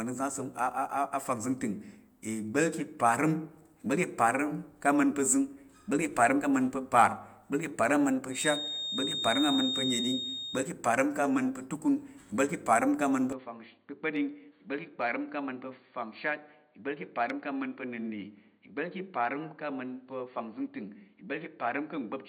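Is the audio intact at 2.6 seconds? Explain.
Yes, the speech at 2.6 seconds plays through without any audible dropout, glitch, distortion or other fault.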